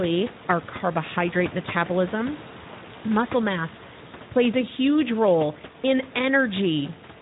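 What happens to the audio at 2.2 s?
At 2.2 s the speech sounds hoarse and grainy, with nothing above about 3.8 kHz, so it comes across as thin and narrowband. That moment is not special: the damage runs through the whole clip. It is the Speex codec working with too few bits, a texture that fits a bitrate around 11 kbps. The CELP model can't spend enough on the excitation signal, so the speech loses its natural detail. The room noise, about 15 dB below the speech, stays in the background.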